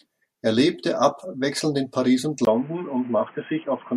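From 2.45 s to the end, after a brief 20 ms gap, the speech turns dull and boxy, with nothing above 3.2 kHz, at much the same level but over a faint new background noise. This is likely an input switched to a poorer, narrower-band device.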